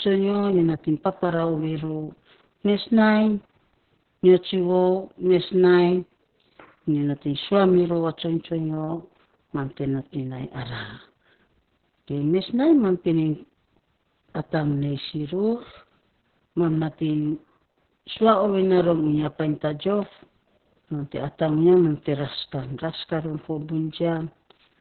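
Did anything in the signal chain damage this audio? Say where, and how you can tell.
Yes, at the codec stage. Opus voice compression runs throughout. Nothing is heard above about 4.3 kHz, so the speech sounds muffled. It is also hoarse and slightly robotic. That points to narrowband SILK coding at a very low bitrate, near 6 kbps, with coarse excitation.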